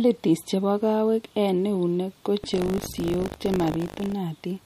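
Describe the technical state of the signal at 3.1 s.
At 3.1 s the speech carries a steady robotic buzz at 50 Hz, a rattling edge that rides on the sound from 2.42 s to 4.14 s. This is buffer tearing: the writer and reader of the playback ring buffer have drifted so they cross inside each period, which fits a buffer cycling every 20 ms. In every period a small slice holds audio from around 70 ms earlier, with hard joins at both ends, and those repeating splices make the buzz.

Under that, the sound has a plainly audible watery, swirling quality with a smeared, metallic edge on sibilants, and nothing is present above 15.3 kHz. This is likely MP3 compression at a low bitrate. The encoder cuts off the treble at a fixed frequency and drops weak spectral detail that flickers on and off between frames, so the hiss-like top of the speech turns swirly and attacks lose their sharpness.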